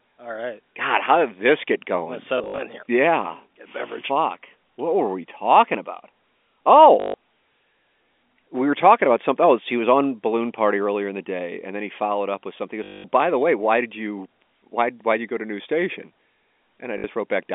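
Packet loss with last packet repeated occurs at 2.38 to 2.58 s (120 ms lost in bursts across 200 ms, just before "in here"), 7.0 to 7.14 s, 12.84 to 13.04 s (just before "by the way why") and 16.98 to 17.04 s. Each time the receiver loops the last packet until fresh audio arrives. The loops ignore pitch, and the longer runs buzz near 50 Hz, which fits 20 ms packets.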